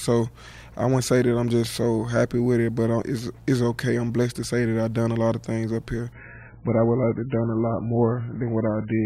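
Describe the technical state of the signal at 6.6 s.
Adaptive stream at a lower bitrate from 6.12 s to 9.06 s: a slowed connection forced a much leaner version. Nothing above 3 kHz survives, and codec artefacts rise.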